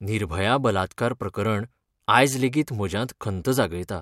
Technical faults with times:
none

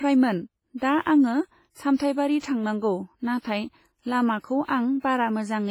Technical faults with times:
0.00-5.71 WMA compression
3.39-3.44 pre-echo

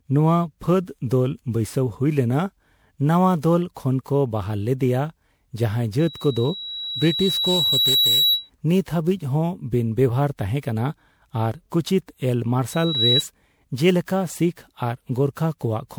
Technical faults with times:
0.00-15.99 generation loss
5.99-8.50 loudspeaker feedback squeal

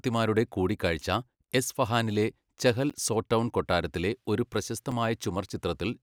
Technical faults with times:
2.90 block of digital silence
4.91 block of digital silence

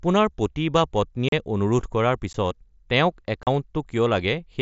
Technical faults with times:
1.29-1.33 unconcealed Bluetooth headset packet loss
2.33 unconcealed Bluetooth headset packet loss
3.43-3.47 unconcealed Bluetooth headset packet loss

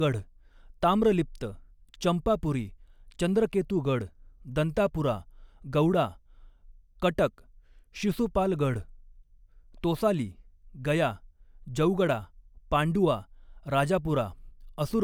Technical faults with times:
none

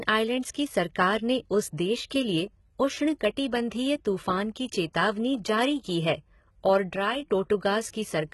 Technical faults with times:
0.00-8.34 HE-AAC compression
6.96-7.22 sudden gain jump

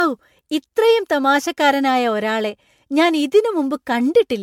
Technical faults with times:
0.00-4.42 generation loss

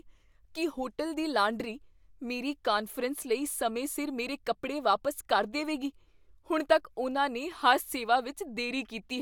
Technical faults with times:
none

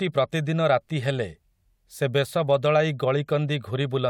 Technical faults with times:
none

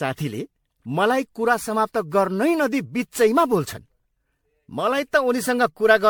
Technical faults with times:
0.00-6.10 generation loss

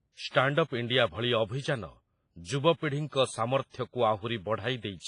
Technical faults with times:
0.00-5.08 WMA compression

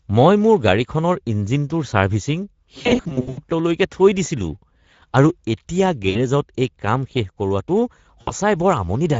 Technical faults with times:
0.00-9.19 Speex codec
2.81-3.40 VoIP packet loss concealed by the speech codec
6.09-6.17 VoIP packet loss concealed by the speech codec
8.21-8.32 VoIP packet loss concealed by the speech codec

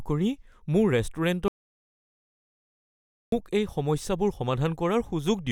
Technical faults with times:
1.48-3.32 audio dropout to silence

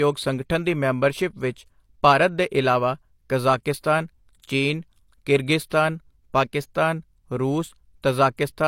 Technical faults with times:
5.70 pre-echo

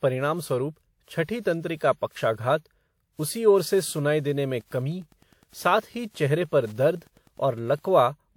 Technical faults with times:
0.00-8.37 generation loss
3.74-7.86 Wi-Fi interference

